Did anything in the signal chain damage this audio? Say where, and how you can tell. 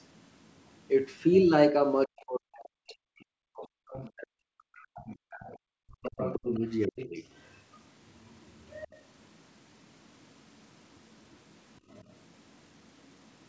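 Yes. The other side's voice leaks through at 0.01–0.88 s, 3.21–3.25 s, 3.58–4.08 s, 4.84–5.13 s, 5.49–5.56 s, and from 6.02 s to the end. It sits about 15 to 35 dB below the talker. Incomplete echo cancellation in the call processing is the likely cause.

Between 2.06 and 7.23 s, the talker's speech is suppressed in double talk. It dips by as much as about 40 dB, for roughly four seconds in all, while the far side speaks. The echo canceller likely could not separate the two voices and turned both down.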